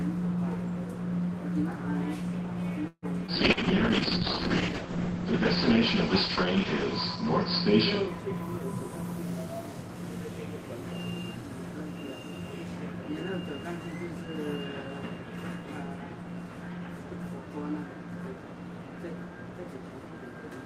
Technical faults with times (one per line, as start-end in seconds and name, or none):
2.87-3.05 call audio freeze
3.26-3.59 short concealed packet loss
3.37-8.68 call bitrate drop
8.60-10.03 jitter buffer speed-up